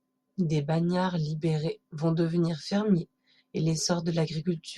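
No technical faults are audible.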